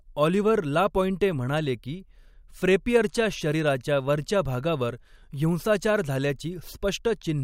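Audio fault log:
No fault is heard in this speech clip.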